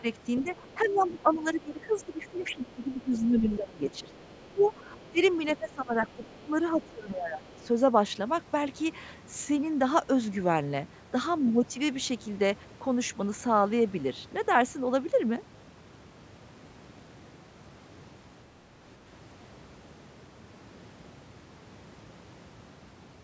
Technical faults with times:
0.00-7.60 speech suppressed in double talk
0.36-1.42 other side's voice leaking through
2.29-2.53 other side's voice leaking through
3.94-5.22 other side's voice leaking through
6.24-6.88 other side's voice leaking through
7.46-7.63 other side's voice leaking through

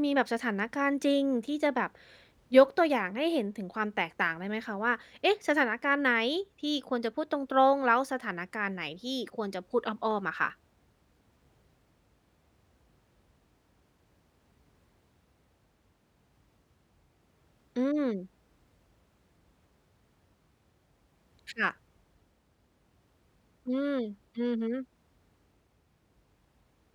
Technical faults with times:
10.26-12.63 CD scratch ticks

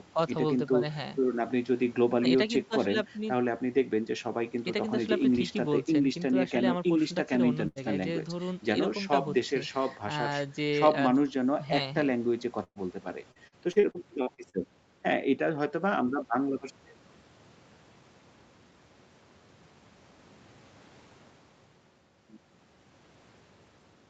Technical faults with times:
7.67-7.79 burst of packet loss
12.64-12.78 burst of packet loss
13.31-14.56 repeated packet loss (robotic sound)

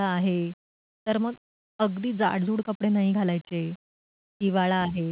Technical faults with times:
none

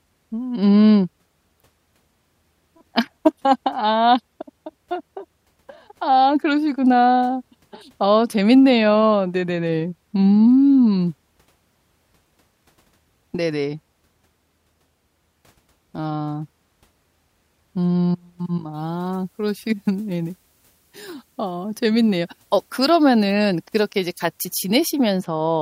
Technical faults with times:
18.74-25.21 pre-emphasis left on

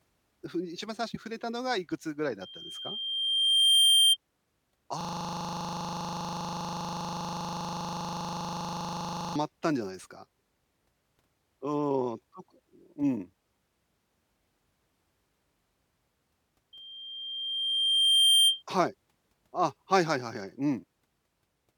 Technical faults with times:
2.41-4.17 loudspeaker feedback squeal
5.01-9.36 system hang loop
16.73-18.63 loudspeaker feedback squeal

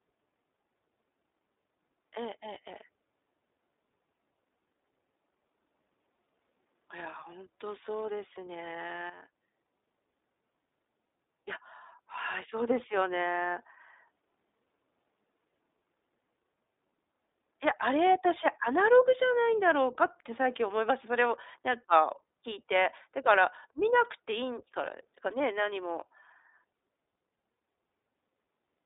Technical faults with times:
0.00-28.86 iLBC codec

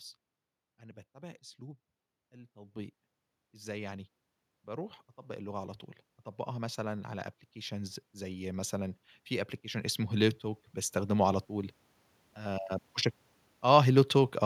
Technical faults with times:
6.43-12.69 automatic gain rising

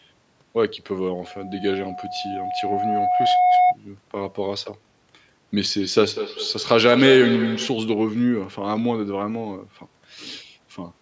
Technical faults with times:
1.25-3.77 loudspeaker feedback squeal
5.80-7.93 feedback echo between two devices

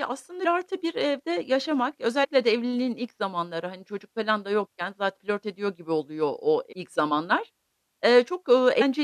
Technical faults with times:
0.44 compressed frames skipped
2.23-2.25 compressed frames skipped
5.16 compressed frames skipped
6.71-6.73 compressed frames skipped
8.80 compressed frames skipped

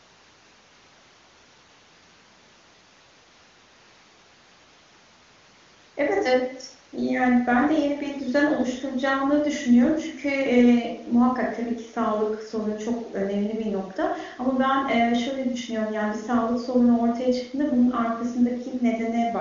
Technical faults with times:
none

